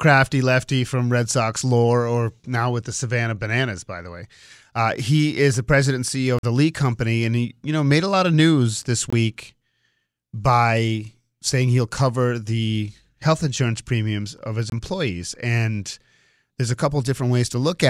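At 6.39 to 6.43 s the speech drops into a block of digital silence lasting about 46 ms, then again for about 23 ms at 9.10 s, right after "lot of news this", and at 14.70 s, after "insurance premiums of his". The output buffer likely went unfilled, and the lengths fit missed blocks of 2048 and 1024 samples. Each is heard as a short hole. On the waveform each is a flat line near zero; the spectrogram shows a blank vertical gap.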